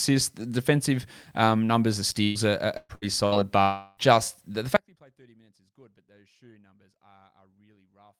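From 2.23 to 3.35 s the speech hits four bursts of packet loss, at 2.23, 2.77, 2.95 and 3.26 s, each losing 60 to 120 ms. The receiver stretches the last sound into a brief fading buzz or hiss before the speech jumps ahead. Only the second gap briefly reaches silence, for about 10 ms.

At 3.62 to 4.00 s a longer concealed gap, likely a long network dropout, removes about 360 ms. The filled sound holds and fades for roughly a third of a second, well beyond a burst's length, and the speech then resumes further on.

From 4.76 s to the end the speech cuts out abruptly, likely an audio dropout to a faint residue. Only a faint sound remains, about 35 dB below normal. There is no concealment buzz here, and the faint residue suggests that the path after the break stayed live.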